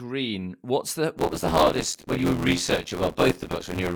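Buffer tearing from 1.17 s onward splices audio about 20 ms old into each period, giving the speech an 86.1 Hz robotic buzz that fits a 512-sample buffer.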